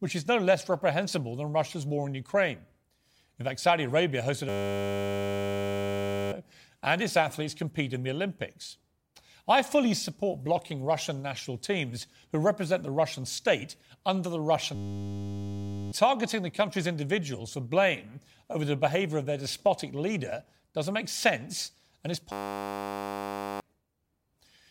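A system hang loop strikes three times: 4.49 to 6.32 s, 14.75 to 15.92 s, and 22.32 to 23.6 s. Playback froze while the hardware replayed one 10 ms slice. Each sounds like a steady 100 Hz buzz, and one to two seconds of speech go missing.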